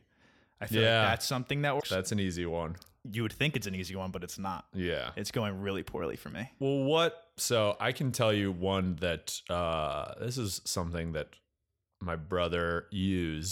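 A speech clip with damaged data in a compressed stream: a short run of the encoded data is corrupt, so the decoder misreads the affected frames, loses its place in the stream and has to hunt for the next valid frame header before it can continue. From about 1.77 to 1.83 s, a window of roughly 66 ms, the speech gives way to a brief, harsh digital blip or chirp.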